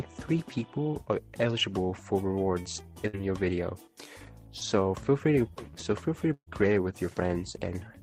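Two bursts of packet loss interrupt the audio. At 3.07 s about 60 ms is missing, bridged by a fading extension of the preceding sound. At 6.33 s about 140 ms drops out; concealment stretches the last sound, then decays to silence before playback resumes.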